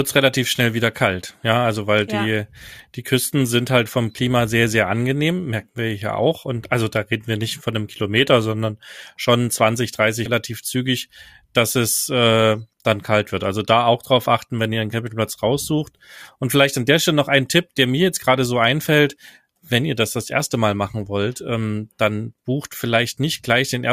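At about 10.25 s the speech jumps abruptly forward, with a brief blip lasting roughly 0.05 s, and resumes at "zügig dass es äh". A stretch of programme is missing at the join. This is most likely a stream segment skipped: one segment failed to load and playback continued from the next.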